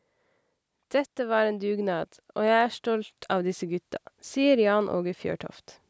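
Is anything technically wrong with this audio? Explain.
Yes. From 0.85 s to 3.9 s there is automatic gain rising. The automatic gain control judged the speech too quiet and pushed its gain up by about 7 dB over roughly three seconds, so the voice and the background noise swell together. The slow, shared climb tells it apart from a sudden level step or someone moving closer to the microphone, where the voice would rise without the room noise following. The call microphone processing shows in the band ending at 8 kHz.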